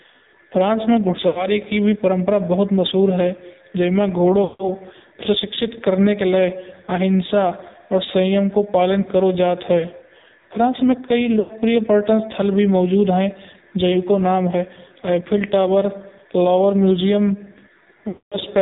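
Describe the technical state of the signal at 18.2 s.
At 18.2 s the signal sits inside a run of lost AMR speech frames from 18.08 to 18.38 s, about 240 ms, which fits roughly a dozen consecutive 20 ms frames failing their checks. The decoder repeats the last good pitch and vocal-tract settings at falling gain, so the sound smears, stretches, and fades toward silence.

Underneath, the whole signal carries heavy AMR narrowband mobile codec damage. Nothing above 4 kHz survives, and the buzzy, synthetic texture points to a low bitrate around 6 kbps. At that rate the few pulses per subframe model the voice only coarsely.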